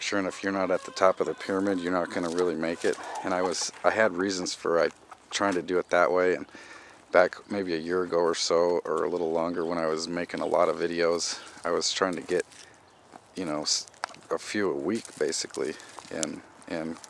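No technical faults occur at any point in the clip, so there is nothing to describe in time order.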